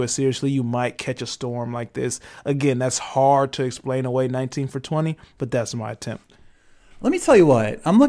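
No technical faults can be heard anywhere in the recording.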